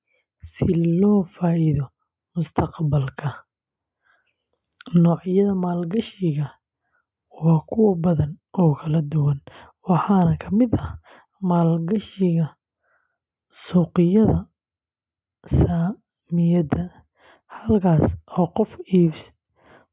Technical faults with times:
none

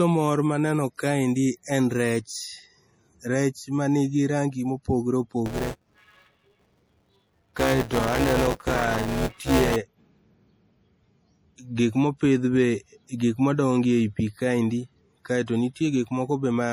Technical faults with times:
0.00-16.72 low-bitrate audio saved at a high bitrate
5.46-9.76 buffer tearing

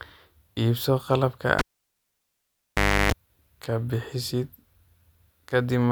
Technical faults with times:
1.59-3.12 cable pulled and plugged in

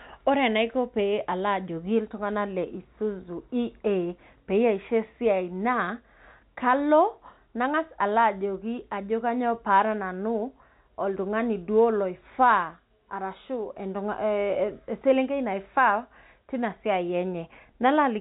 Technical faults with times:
none

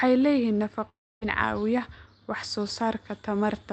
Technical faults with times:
0.89-1.23 long network dropout

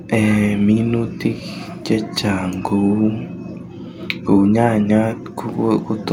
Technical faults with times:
none

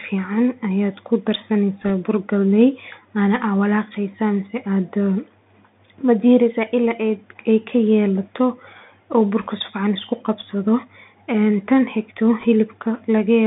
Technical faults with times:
0.00-13.46 Bluetooth CVSD headset codec
1.82-1.90 bit errors on a Bluetooth voice link
9.41-9.46 bit errors on a Bluetooth voice link
12.40-12.45 bit errors on a Bluetooth voice link

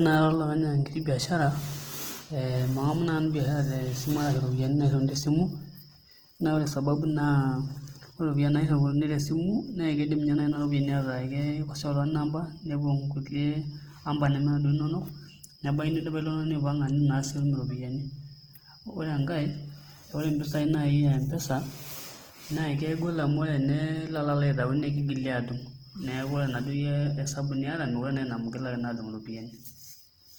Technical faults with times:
0.00-30.39 Opus compression

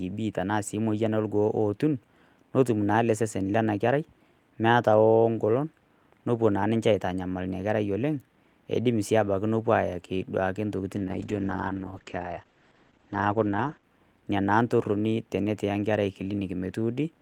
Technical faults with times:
10.98-13.91 call bitrate drop

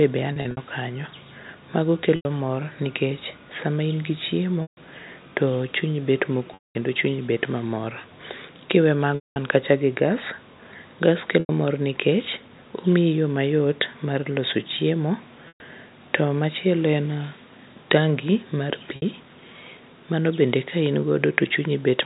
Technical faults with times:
0.33-0.57 packet loss with pitch repetition
2.16-2.25 packet loss with pitch repetition
4.62-4.77 packet loss with pitch repetition
6.54-6.75 packet loss with pitch repetition
9.15-9.36 packet loss with pitch repetition
11.40-11.49 packet loss with pitch repetition
15.48-15.60 packet loss with pitch repetition
18.96-19.02 packet loss with pitch repetition

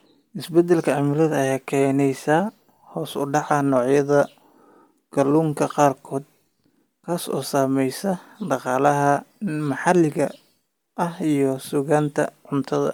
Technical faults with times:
0.00-12.93 Bluetooth LC3 compression

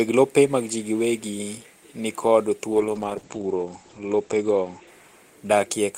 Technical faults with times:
2.73-5.97 call bitrate drop

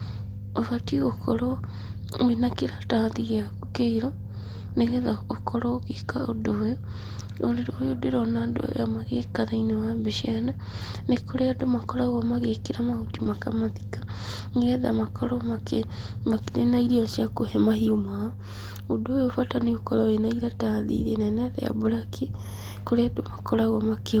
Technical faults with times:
13.23-13.27 short concealed packet loss
13.25 lost packet rebuilt from error correction
19.57-19.67 lost packet rebuilt from error correction

